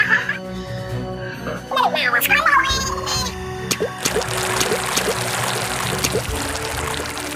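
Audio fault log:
2.80–7.36 s: timecode bleed, a steady chirping warble near 1 and 2 kHz about 20 dB under the sound, from leaked square-wave timecode fitting 23.976 fps.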